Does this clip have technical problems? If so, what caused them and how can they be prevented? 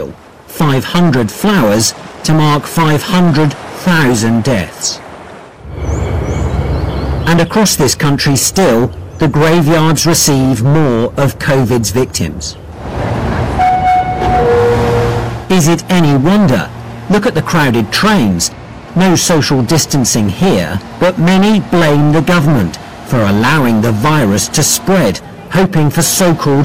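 Yes. Hard clipping runs through the whole clip: the signal is driven about 18 dB past what the stage can pass, so roughly a fifth of the waveform is sliced flat, giving a harsh, buzzy fuzz on every loud moment rather than the rounded, gentler thickening of soft saturation. Prevent it by setting gain so peaks stay several decibels below full scale.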